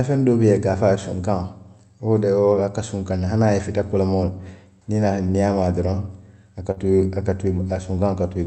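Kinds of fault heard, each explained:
Burst of packet loss: Around 6.71 s a short run of packets on the Opus call path arrived too late or not at all. The receiver had nothing to decode, so it stretched the last speech it had and faded it for about 47 ms, giving a brief held buzz or hiss. About 40 ms of the real speech is skipped, and the audio resumes at 6.79 s slightly further along, with a small jump.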